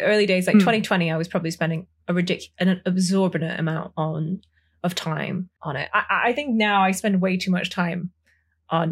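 Nothing in this speech recording goes wrong at any point; there are no dropouts, glitches or other technical faults to pick out along the way.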